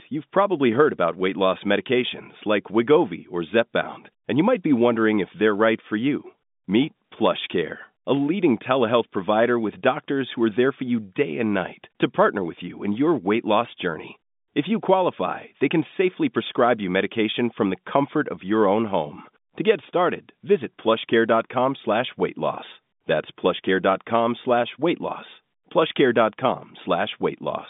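No faults are audible anywhere in this speech.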